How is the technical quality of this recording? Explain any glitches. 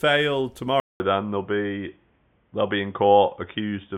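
The recording quality drops partway through. At 0.8 s the speech goes silent for about 200 ms, then returns dull and boxy, with nothing above 3.6 kHz, and stays that way to the end. A faint new background noise sits well below the speech, while the loudness stays about the same. The likely cause is the input switched to a poorer device, such as another microphone or a headset's call profile, whose narrower band strips the upper frequencies.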